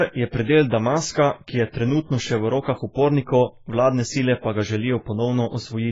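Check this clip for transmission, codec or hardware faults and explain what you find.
The clip carries one fault, present throughout: heavy AAC compression, likely from AAC-LC at a very low bitrate, which fits around 16 kbps. The encoder quantised each frame's frequency lines coarsely against a hearing model, discarding detail and capping the band. The speech sounds dull and smeared, with a warbling, fizzy edge on sibilants and held vowels. A spectrogram shows a hard ceiling at 7.5 kHz with nothing above, plus blotchy holes and patchy noise in the upper bands.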